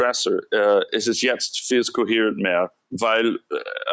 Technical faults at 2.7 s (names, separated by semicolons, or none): sound cut by the noise suppressor